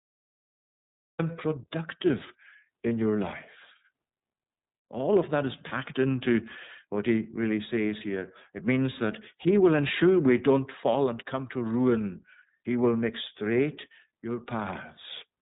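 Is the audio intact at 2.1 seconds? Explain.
No. At 2.1 seconds, as everywhere in the clip, the speech sounds dull and boxed-in, with nothing above about 3.8 kHz, and it has a plainly audible rough, synthetic grain. This is iLBC codec damage. The narrowband codec discards the upper band and rebuilds each block's excitation independently, without carrying detail over from the previous block, which leaves that coarse texture. The character fits its 30 ms, 13.33 kbps mode.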